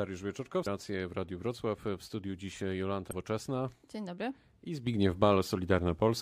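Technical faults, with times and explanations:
0.65 s and 3.11 s, damaged data in a compressed stream: two short blips, each well under 20 ms, the first right before "racje w". Some bytes in the compressed stream got mangled, so the decoder couldn't make sense of those frames, lost its footing, and had to hunt for the next valid frame header before it could carry on. That brief scramble is what you hear.
4.87 s to the end, sudden gain jump: the level steps up by about 7 dB in an instant, and the background noise rises right along with the speech, which is the giveaway that the whole signal was scaled rather than the talker getting louder. It's likely a digital gain setting or bit shift applied on a single sample with no ramp, so there's no smooth transition, just an abrupt step that holds until the end of the clip.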